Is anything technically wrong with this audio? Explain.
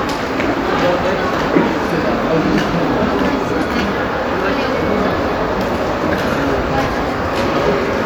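No, nothing technically wrong is audible in this audio.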